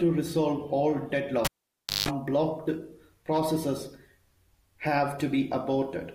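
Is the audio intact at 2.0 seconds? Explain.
No. At 2.0 seconds the audio is inside a cable pulled and plugged in fault running from 1.45 to 2.09 s, between "resolve all" and "blocked processes". A pop marks the pull, then about 0.59 s of near silence, then a 0.17 s burst of 50 Hz mains buzz as the plug's tip touches before seating, and a second pop when sound returns. That hum burst and the paired pops set it apart from a plain digital dropout.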